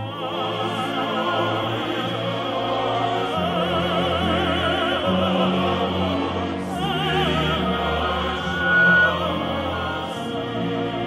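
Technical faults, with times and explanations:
8.28–9.19 s: loudspeaker feedback squeal. A single tone at 1.5 kHz rises out of the audio and swells over roughly half a second into a steady squeal, ending up about 10 dB above the programme level before it stops at 9.19 s. The microphone was picking up the loudspeaker it was driving, and at 1.5 kHz the loop gain went above one, so that frequency kept reinforcing itself on each pass.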